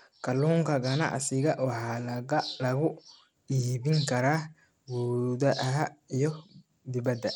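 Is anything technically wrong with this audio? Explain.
Yes. Throughout the speech, the treble is unstable. The top end thins out and flickers, and a gritty, grainy noise rides on the sound, with some harsh aliasing. The damage is plainly audible. The likely cause is Bluetooth SBC compression. SBC splits the signal into a few wide bands and shares out bits without any model of hearing. The damage points to a low bitrate, around 96 kbps. The weak upper bands get almost no bits, and the rest are coarsely quantised.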